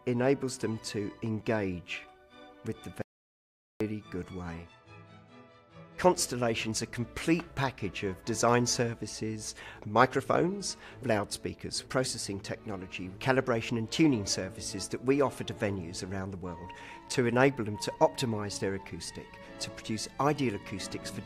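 At 3.02 s the audio drops out to silence for about 0.79 s, back at 3.80 s, no room tone; likely a lost input, link failure or stray mute.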